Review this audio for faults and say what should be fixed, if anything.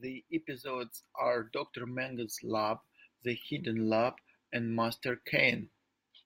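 Nothing needs fixing: no technical faults can be heard anywhere in the recording.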